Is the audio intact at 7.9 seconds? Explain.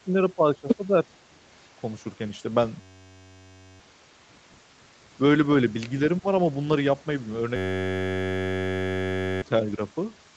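No. At 7.9 s the clip is inside a system hang loop running from 7.56 to 9.42 s. The host or driver stalled while the audio hardware kept replaying the same ring buffer, so a single 10.67 ms fragment, which fits a 512-sample buffer, repeats back to back. With a loop that short, the repetition fuses into a steady buzz at about 93.8 Hz instead of a stutter, and roughly two seconds of the real signal never arrives.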